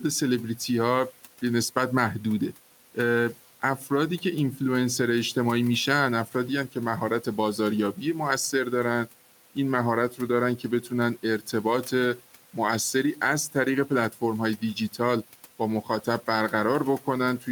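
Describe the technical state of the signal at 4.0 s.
At 4.0 s there is speech cut by the noise suppressor, spanning 3.78 to 4.6 s. Mistaken for noise, brief fragments of speech, around a tenth of a second in total, are pulled down by up to about 7 dB and sound swallowed. On a spectrogram they show as faded, thinned patches.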